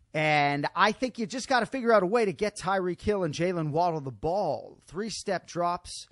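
The whole clip has a watery, swirly quality, with hissy consonants turning metallic and chirpy. That points to MP3 compression at a low bitrate, likely around 48 kbps. With so few bits, the encoder zeroes out quieter frequency lines, which then flicker in and out from frame to frame. That flicker is the swirl you hear, and attacks come out smeared.

From 2.36 to 2.39 s there's a pre-echo: a short hiss, about 12 dB up, creeping in for roughly 23 ms just ahead of a sharp onset, which then lands soft instead of crisp. The codec spread its quantisation noise across the whole transform block, so noise sized for the loud attack leaked into the quiet stretch before it. That fits long blocks of about 48 ms, with the encoder never switching to short ones to contain it.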